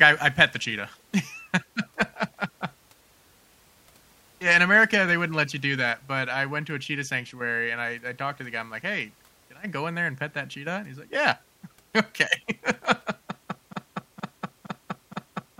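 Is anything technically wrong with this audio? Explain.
Yes. From 13.73 s to the end, the speech hits a broken-record loop: a 0.47 s fragment repeats exactly, back to back, four times. The player or stream likely stalled and kept resending its last chunk, so the real audio there is gone.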